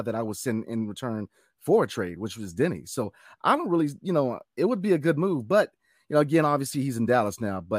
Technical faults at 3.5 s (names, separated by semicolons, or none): none